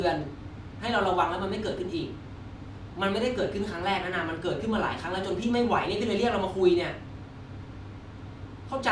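A short speech recording with no technical faults to report. Nothing heard anywhere in the audio points to a problem that needs a time or a cause.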